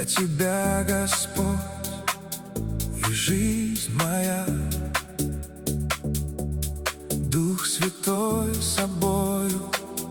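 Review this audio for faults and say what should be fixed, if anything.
No faults detected; nothing to fix.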